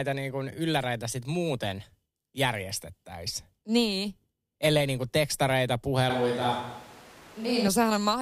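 From 6.10 to 7.67 s, after "niin kun tekstareita", speech abruptly turns hollow and roomy, likely a switch to a distant microphone. The spectrogram shows thinned bass and smeared reverb tails, with the level barely changing.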